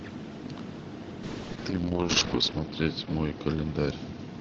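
From about 1.24 s to the end, there's a call bitrate drop. The call's bandwidth estimate sank, so the encoder (this sounds like Opus on a WebRTC path) was squeezed onto far fewer bits, which fits a fall from around 32 kbps to 9 kbps. The speech turns rough and watery, and the top end gets clipped from 8 kHz down to 6 kHz, so it sounds duller. It sits at its worst for about 1.13 s and doesn't recover before the clip ends.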